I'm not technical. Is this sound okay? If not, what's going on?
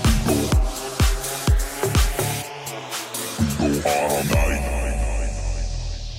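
No. From 0.18 to 6.02 s, faint ticks repeat about every half second. These clock slip clicks likely come from two devices running on slightly mismatched clocks, dropping or repeating a single sample. Unlike random crackle, the ticks are evenly spaced and vanish in silence.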